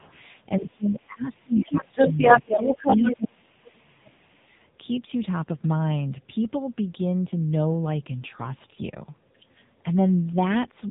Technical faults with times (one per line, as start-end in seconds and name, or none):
0.00-10.91 AMR narrowband mobile codec
0.00-0.05 speech suppressed in double talk
0.00-0.12 other side's voice leaking through
0.60-2.51 speech suppressed in double talk
1.38-3.26 other side's voice leaking through
2.86-4.29 speech suppressed in double talk